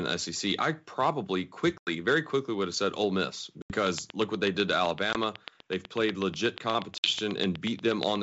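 Speech drops to hard-edged silence at 1.78–1.90 s, 3.62–3.73 s, 5.13–5.16 s and 6.98–7.12 s. This is packet loss on an ADPCM call. Runs of packets went missing and were filled with silence. The receiving decoder's adaptive predictor and step size then no longer matched the sender's, so after each gap the speech comes back with slight distortion that clears within some tens of milliseconds. Unlike a plain mute, the damage carries past the hole into that short recovery.

From 3.87 s to 8.17 s a train of clicks runs over everything, including the pauses: about 40 near-identical pulses at a steady 8.2 per second, standing well above the speech. Nearby electrical interference is the likely cause. Unlike the dropouts, these clicks keep a fixed clock, remove no audio and show no recovery afterwards. The wideband G.722 coding itself, consistent with 64 kbit/s, keeps speech clear up to 7 kHz.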